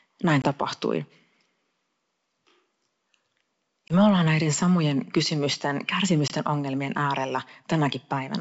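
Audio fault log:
0.42–0.49 s, 3.88–3.94 s and 6.28–6.33 s: packet loss on an ADPCM call. Each time about 20 ms of speech becomes abrupt silence, which fits one lost packet on the 64 kbit/s G.722 link. The second hole comes just before "me ollaan näiden samojen". The third comes just after "ollaan näiden samojen kysymysten". The decoder's adaptive predictor and step size drift from the sender's. So the speech returns with brief slight distortion, then settles within tens of milliseconds.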